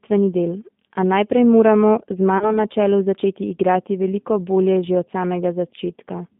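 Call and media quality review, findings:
G.729 codec throughout: narrowband, roughly 150 Hz to 3.6 kHz, with clearly rough, synthetic texture from the 10 ms frame-by-frame model rebuild. Sounds like the 8 kbit/s G.729A flavour.

VoIP packet loss concealed by the speech codec, 2.38 to 2.58 s: a stretched, fading smear where the decoder extrapolates across roughly 30 ms of missing audio (about three frames), then takes a while to recover.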